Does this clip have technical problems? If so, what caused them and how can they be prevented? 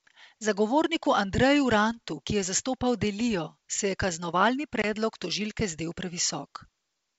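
Yes. Packet loss on an ADPCM call leaves a hard-edged silent hole from 4.82 to 4.86 s. It lasts 20 ms, about one packet. The G.722 decoder's predictor and step size then drift from the sender's, so the speech returns briefly distorted. Packet loss concealment with decoder state recovery prevents this.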